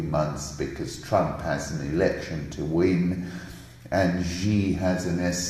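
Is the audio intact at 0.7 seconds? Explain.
Yes, the audio is intact at 0.7 seconds, with no dropout, click, distortion or other fault at that point.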